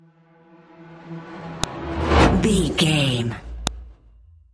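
File header played as audio, at 1.64 s and again at 3.67 s: each is a sharp, loud click lasting only about 2 ms, cutting through whatever the sound is doing at that moment. The clicks mark places where separate WAV pieces were joined or streamed with their headers left in, so the few dozen header bytes were read as sample values. Because those bytes bear no relation to the waveform around them, each splice point snaps audibly.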